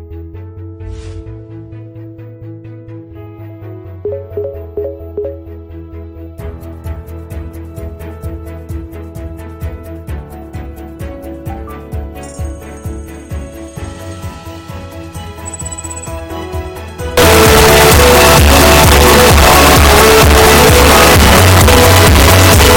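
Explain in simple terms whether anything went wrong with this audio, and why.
Something clearly goes wrong from 17.17 s until the clip ends at 22.77 s. The sound abruptly turns very loud and harsh, with a buzzy, square-edged quality, and quiet background noise becomes as loud as the main sound, though its pitch can still be followed. This is a float read as integer fault, likely caused by audio stored as 32-bit floating-point numbers being read back as 32-bit whole numbers. Ordinary clipping only flattens the loudest moments. Here even the quietest parts are pushed to the same harsh level.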